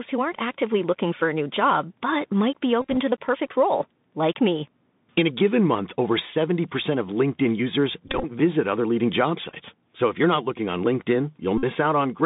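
A Bluetooth CVSD headset codec carries this speech throughout. The 64 kbps one-bit delta coder tracks the waveform with an adapting step, and the line passes only about 150 Hz to 3.7 kHz. The damage is plainly audible: a thin, boxed-in band, a granular hiss riding under the speech, and s sounds that turn scratchy wherever the signal moves faster than the step can follow.

A Bluetooth headset packet repeated fault also strikes four times, where lost voice packets were replaced by decoding the previous packet's bits again. From 2.81 to 2.97 s, about 94 ms of audio is lost in scattered gaps, with runs of roughly 20 ms that buzz near 267 Hz. From 8.08 to 8.26 s, about 86 ms is lost the same way. Shorter bursts at 9.50 to 9.54 s (15 ms) and 11.58 to 11.64 s (about 53 ms) add further repeated packets.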